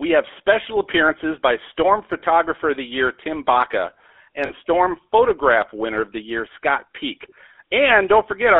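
GSM full-rate codec damage runs through the whole speech clip. The codec rebuilds the voice from a vocal-tract model excited by sparse regular pulses, leaving a plainly audible buzzy, gravelly roughness. The band is confined to roughly 300 Hz to 3.5 kHz, consistent with 13 kbps GSM.

Lost GSM frames occur at 2.20 to 2.22 s, a single 20 ms frame, and at 4.46 to 4.51 s, two frames totalling 40 ms. Each gap is covered by repeating the last good frame's settings, so the sound briefly holds as a rough metallic ring.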